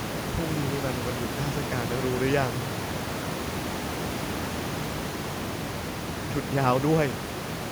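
Nothing goes wrong in this bit of speech; the only thing in the background is the room's own noise, sitting about 7 dB under the talking.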